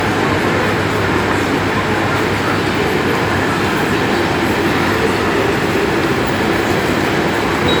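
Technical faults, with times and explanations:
Throughout, generation loss: the sound has a swirly, hollow, smeared quality, with transients blurred rather than crisp, which points to several lossy passes, most likely about five rounds of MP3 coding at something like 128 kbit/s. Each re-encode quantises on a shifted frame grid, so errors stack up. A spectrogram shows flickering holes and smeared blocks across the band, with nothing above 20.1 kHz, while the waveform shows softened attacks.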